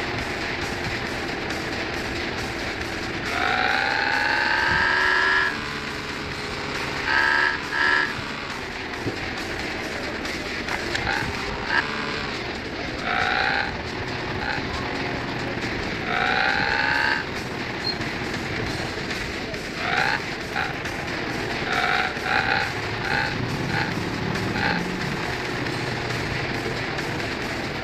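From 8.52 s to 27.77 s a train of clicks runs over the sound, about 4.26 per second at an irregular pace, roughly seventy in all, each about as loud as the sound itself. They are heard as ticking or popping that carries on through the pauses. The likely cause is interference from nearby equipment or a faulty connection or power supply injecting pulses. A waveform shows thin, similar spikes. A spectrogram shows them as narrow vertical lines spanning the whole frequency range.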